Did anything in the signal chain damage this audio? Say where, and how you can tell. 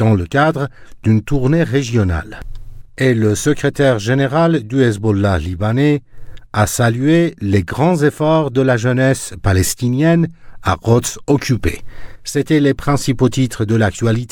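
No, nothing in the chain has left an audible mark on this audio: there is no wiring, converter, buffer, format-conversion, processing, network, storage or playback damage to point to.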